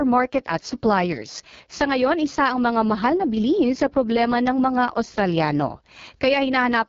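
AMR wideband (HD Voice) codec damage runs throughout the speech. The vocal tract model is starved of bits, which fits the lowest 6.6 kbit/s mode, so the speech sounds rough and raspy. Nothing reaches above 6.8 kHz, and the top band is filled with shaped noise.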